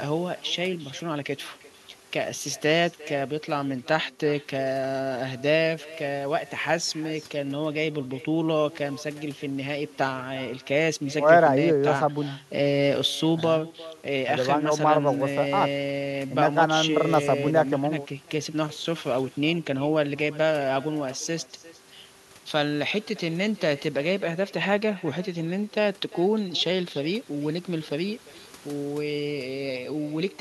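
Speech runs through the whole clip with echo with no canceller. Each phrase returns around 400 ms later, about 20 dB quieter and thinner, because a far-end loudspeaker feeds its own microphone and nothing removes it. A spectrogram shows faint delayed copies trailing every syllable, and the waveform shows small ghost bursts.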